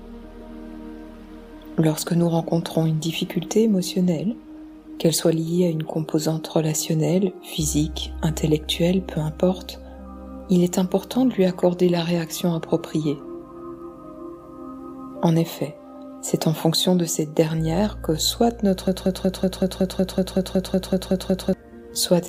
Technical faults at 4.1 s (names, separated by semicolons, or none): none